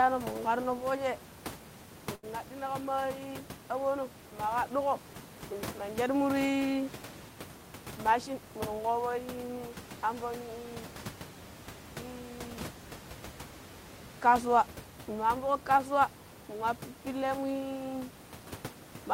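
At 2.15 s, a burst of packet loss hits. The last sound is held and faded for 74 ms. Then 80 ms of speech is skipped.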